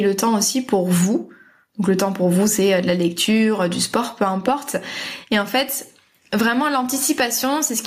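Gain pumping runs throughout the speech: the level swings around 10 dB, pulled down under loud syllables, likely an overdriven fast limiter, leaving a flattened, squashed waveform envelope.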